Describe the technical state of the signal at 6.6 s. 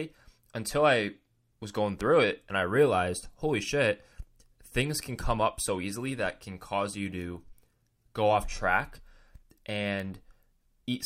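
At 6.6 s the speech signal is intact, with no audible technical fault at that moment.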